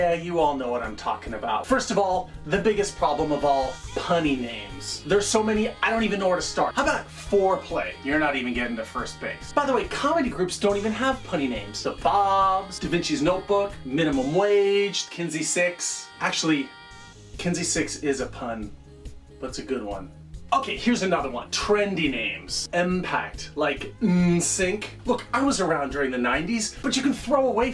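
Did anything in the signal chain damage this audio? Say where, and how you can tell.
No, no damage is audible.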